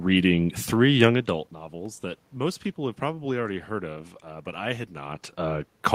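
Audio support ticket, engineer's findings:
No system fault found in the speech recording. Room background noise is present throughout, and level shifts near 1 s and 5 s come from the talker changing distance to the microphone.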